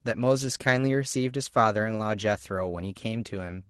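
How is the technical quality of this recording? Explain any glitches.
No glitches can be heard in this speech recording. It carries the character of a call codec working as intended, with the treble tapering off above roughly 12 kHz, which fits a low-bitrate Opus stream at around 20 kbps.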